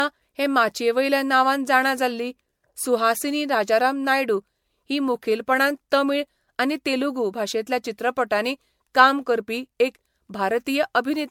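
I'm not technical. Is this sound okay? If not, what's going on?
No. Throughout the speech there is generation loss: the sound is swirly and hollow, and the starts of sounds such as consonants are blurred rather than crisp. The likely cause is that the recording was saved in a compressed format like MP3, then opened and saved again, around five times. Each save discards a little more detail in a slightly different place, so the damage builds up.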